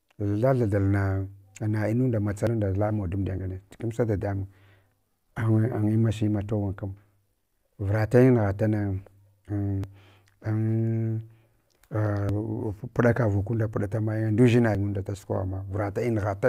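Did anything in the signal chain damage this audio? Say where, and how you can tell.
Yes, audio missing between chunks: tiny skips at 2.47, 9.84, 12.29 and 14.75 s, on a 2.5 s grid, likely a buffer dropping a few tens of milliseconds at each handover.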